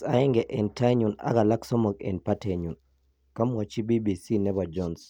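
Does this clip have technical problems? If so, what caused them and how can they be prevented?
No, the speech signal has no audible technical faults, so there is nothing here that needs preventing.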